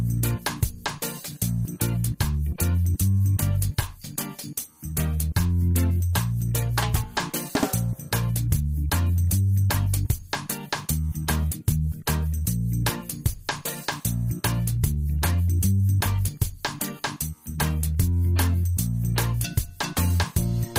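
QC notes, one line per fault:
Nothing stood out on listening.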